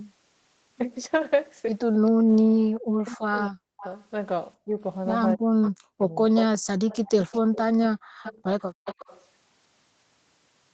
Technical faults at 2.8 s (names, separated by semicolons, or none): speech suppressed in double talk